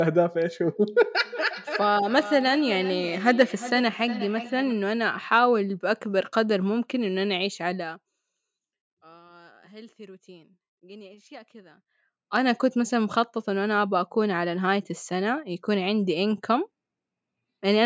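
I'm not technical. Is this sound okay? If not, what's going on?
No, there are two problems.

From 1.24 to 4.85 seconds there is feedback echo between two devices. Two devices in the same room were on one call. One played the other's sound out loud, and that microphone heard it again. Its echo canceller only removes its own playback, so the echo got through. Each bit of speech comes back about every 0.4 seconds. The repeats are quieter than the speech and sound thin and ringing.

From 7.71 to 8.21 seconds there is zipper noise. The volume drops a lot here, but not smoothly. It moves in tiny jumps, roughly a hundred each second. Each jump makes a very small click. Together the clicks make a fast ticking or zipping sound on top of the speech while the volume falls.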